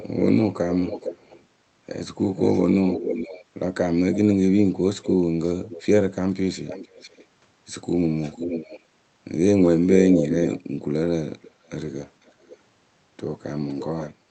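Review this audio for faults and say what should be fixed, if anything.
Echo leak runs through the speech at 0.00–1.45 s, 2.36–7.25 s, 8.19–8.80 s, 9.80–12.57 s and 13.69–14.11 s. A second copy of the speech trails about half a second behind, drifting from 456 ms to 508 ms, mostly around 10 dB down, louder near 10–12 s and quieter at the end. That is likely a far-end loudspeaker feeding its microphone past an incomplete echo canceller. Unlike room reverberation, which smears into a tail, this is a distinct repeat. Fixing the far end's echo cancellation, or having that side use a headset, would prevent it.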